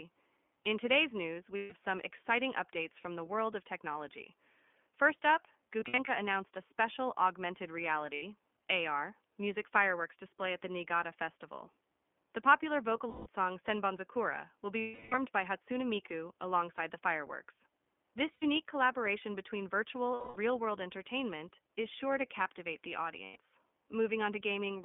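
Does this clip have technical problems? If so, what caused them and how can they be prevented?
Yes. The whole clip carries the iLBC codec: it sounds band-limited and slightly rough and synthetic, which fits a 15.2 kbps iLBC stream coding each 20 ms frame's excitation independently. A spectrogram shows energy confined to roughly 200 Hz to 3.4 kHz, with an empty band above. To prevent this, use a wideband codec such as Opus where the network allows it.

There are lost iLBC frames at 1.56 s after "today's news", at 5.80 to 6.10 s before "announced a special augmented", and at 8.14, 13.10, 14.80 after "will be", 18.34, 20.14 and 23.24 s. Each gap lasts 80 to 320 ms, and the 5.80 s losses are scattered over 280 ms. The decoder repeats the last pitch cycle with added noise, so each gap sounds like a held, buzzy vowel, and speech recovers almost at once. On a spectrogram these gaps show as flat, smeared harmonic stripes, and the waveform shows a repeating, decaying cycle. 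To prevent this, use jitter buffering, forward error correction or redundant packets.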